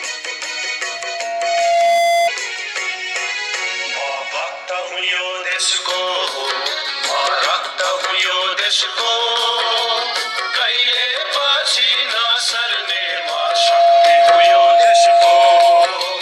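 The audio has loudspeaker feedback squeal at 685 Hz, from 0.83 to 2.30 s and, louder, from 12.71 to 15.88 s. Unlike a steady tone, it swells over about a second as the tone builds around the microphone-loudspeaker loop.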